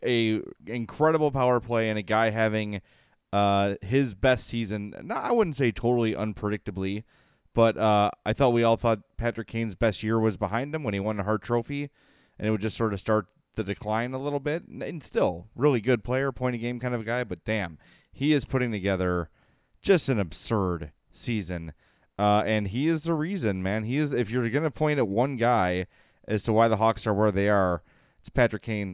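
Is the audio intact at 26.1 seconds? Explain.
Yes, at 26.1 seconds the speech plays through intact, with no dropout, click, distortion or other fault at that moment.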